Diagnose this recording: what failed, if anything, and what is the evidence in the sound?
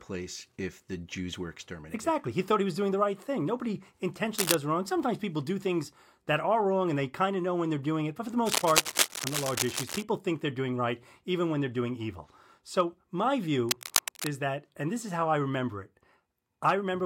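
Three bursts of dense, uneven scratching sit on top of the speech, roughly as loud as the talker: a short one from 4.38 to 4.55 s, a long stretch from 8.46 to 10.04 s between "for the" and "think they're doing right", and another from 13.69 to 14.27 s just before "that and this is". This is cable scratch noise in the analogue wiring, most likely a worn cable or connector being moved so its contact resistance fluctuated rapidly.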